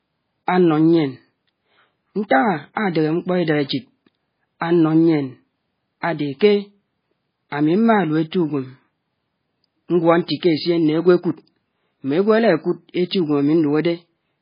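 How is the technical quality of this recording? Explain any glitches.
The technical quality is poor throughout. The fault is low-bitrate audio saved at a high bitrate, likely a very low-bitrate MP3 re-encoded at a higher rate. The speech has nothing above 5 kHz and sounds dull and smeared for the whole clip.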